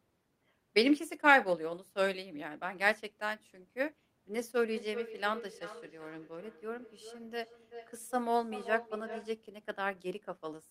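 From 4.65 s to 9.37 s there is feedback echo between two devices. A second device plays this microphone's signal back into the room, and the microphone catches it again. The speech returns roughly every 0.4 s, sounding thinner and ringing, peaking about 13 dB below the speech.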